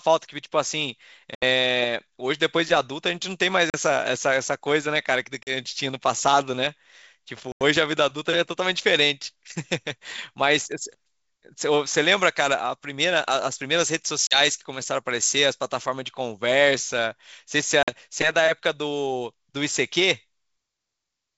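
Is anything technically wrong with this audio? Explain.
Yes, there are two faults.

Packet loss on an ADPCM call: hard-edged silent holes at 1.35, 3.70, 5.43, 7.52, 14.27 and 17.83 s, each 40 to 90 ms long, each 4 to 10 packets' worth. Speech resumes briefly slightly distorted, because the decoder's predictor and step size have drifted from the sender's and need some tens of milliseconds to resynchronise.

Pre-emphasis left on: from 12.11 to 15.86 s the sound turns thin, bright and sibilant, with 10 kHz about 10 dB above 1 kHz. This fits a 50 µs FM boost whose matching de-emphasis cut was never applied. The wideband telephone coding itself, G.722, still carries speech cleanly up to about 7 kHz.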